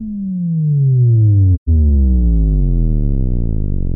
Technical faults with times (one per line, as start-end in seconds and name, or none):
1.54-1.69 AAC frame loss with muting